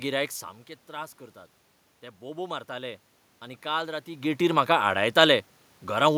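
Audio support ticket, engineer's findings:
Automatic gain rising, 2.18 to 4.37 s. Voice and room noise swell together over about 2 s. AGC stage responding to input that fell by about 12 dB, raising gain about 6 dB gradually. Level shifts near 0.5 s and 4 s are the talker moving; room noise is in the recording.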